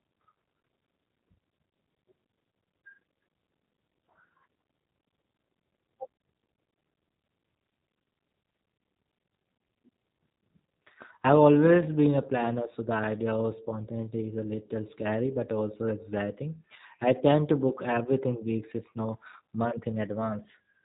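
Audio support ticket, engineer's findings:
Speech rough and synthetic across whole clip, hard band limit at 3.8 kHz. Likely G.729 codec (G.729A, consistent with 8 kbit/s): pulse-excited vocal tract model in 10 ms frames. Spectrogram: empty above 3.8 kHz, smeared harmonics, blocky 10 ms texture.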